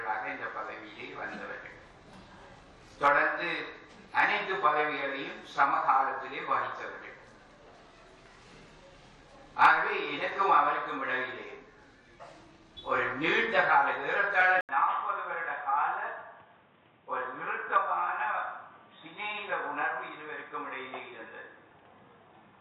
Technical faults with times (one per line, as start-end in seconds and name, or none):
14.61-22.60 input switched to a poorer device